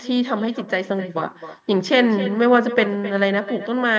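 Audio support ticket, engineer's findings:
Quieter, thinner copy of speech trailing each phrase by roughly a third of a second, throughout; echo with no canceller at the far end. Loudspeaker into mic, about 13 dB down, returned after network round trip.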